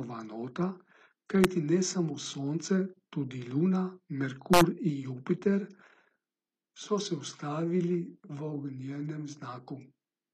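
Throughout the speech, s sounds turn gritty and metallic, and the treble is synthetic, with nothing above 14.9 kHz. The likely cause is HE-AAC compression at a rate that fits about 24 kbps, which fakes the treble by copying lower bands upward.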